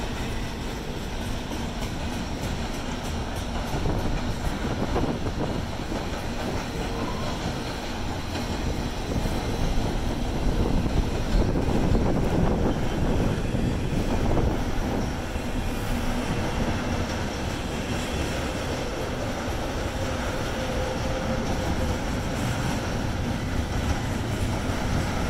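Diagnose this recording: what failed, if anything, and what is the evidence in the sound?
A second copy of the signal was likely captured through a slower parallel path, such as a duplicated driver or buffer route, and summed back in. The result is a doubled audio track from 11.62 s to 13.40 s. A full-band copy trails the original by roughly 0.7 s at a few decibels lower, around 5 dB down. It carries no decay or added room colour, and it switches on and off abruptly at both ends.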